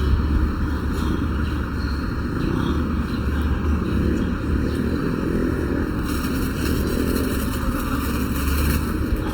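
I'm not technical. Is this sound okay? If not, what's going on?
No. From start to finish, one side of the audio arrives less than a millisecond late and the two sides are combined. This channel delay (comb filtering) cancels a run of evenly spaced pitches starting around 700 Hz, so the sound is hollow and phasey. The sound is also rough, grainy and noisy-textured throughout, most likely from Opus compression squeezing it too hard to save space.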